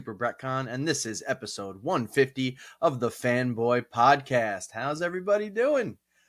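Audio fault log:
No technical faults can be heard; the signal holds steady and continuous across the entire clip.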